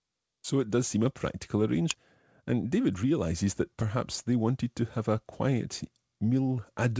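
At 1.90 s the speech skips ahead: around a fifth of a second of audio is thrown away and the two sides are butted together with no silence or fill, which is what separates it from a dropout or concealment gap. The speech simply lurches forward mid-flow.

From 3.88 to 4.41 s a jitter buffer speed-up compresses the speech to about 107% speed by trimming short pitch-period pieces, roughly 40 ms in all. Unlike a pitch shift, the pitch stays put and only the pacing sounds hurried, heard through the G.722 path's 8 kHz bandwidth.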